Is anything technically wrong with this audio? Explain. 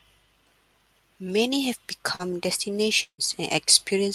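Yes, two network faults interrupt this speech.

From 2.15 to 2.22 s there is a short concealed packet loss. About 40 ms of the stream arrived too late for the decoder, and the receiver bridged the hole with roughly 37 ms of synthesized continuation built from the preceding audio, then cross-faded back into real data. It sounds like a brief smear or wobble.

From 3.03 to 3.21 s a burst of packet loss removes about 160 ms. The concealment extends the last received sound for about 150 ms, attenuating it as the gap lengthens, so it comes across as a held buzz or fading hiss that gives way to about 80 ms of silence. Playback then resumes further along, and the audio in between never returns.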